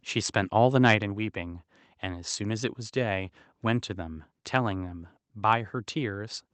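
Microphone overload, from 0.85 to 0.94 s: the loudest peaks here come out flattened and gritty, with a brittle, crackling edge laid over the speech. This is likely the microphone's input gain set too high, so the signal tried to swing about 3 dB past what the converter could represent. A small fraction of the samples were pinned at the converter's limit, and their squared-off tops add harsh distortion.

Microphone volume stepped down, at 1.02 s: shortly after that distorted burst, the speech and the background both fall by about 4 dB in a single abrupt step rather than a gradual fade. This likely comes from the call software detecting the clipping and lowering the device's input volume in one move. Because the room tone drops along with the speech, the step is audible as a sudden shift in overall level.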